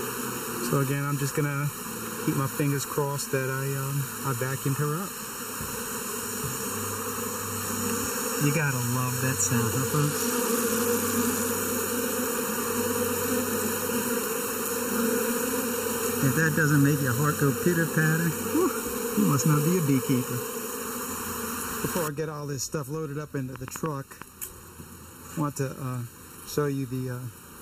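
From start to end, one channel runs late by under a millisecond, and the mono sum suffers channel delay (comb filtering). Shared content cancels at a first notch near 700 Hz and at evenly spaced notches above it. The sound is hollow and phasey.

From 9.89 to 11.51 s, a Bluetooth SBC bit pool drop dulls the treble. Gritty noise rises over the sound. This fits the bit pool falling from 31 to 14, near 99 kbps. The upper sub-bands lose their bits, and the rest are coarsely quantised.

From 23.56 to 24.23 s, a train of clicks ticks over the sound. It is a handful of similar pulses at an uneven pace of about six per second. They peak well above the audio, roughly 15 dB. Nearby electrical interference is the likely source.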